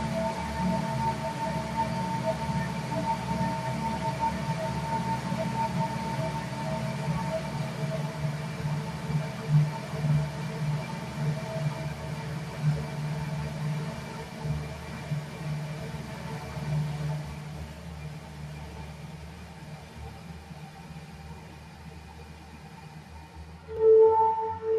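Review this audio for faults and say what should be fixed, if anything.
Repeated buffers click at 21.49 s and 23.77 s. Each time, a 5.8 ms block replays once, which fits a 256-sample buffer arriving late. Prevent this with a larger output buffer or more reliable audio thread scheduling.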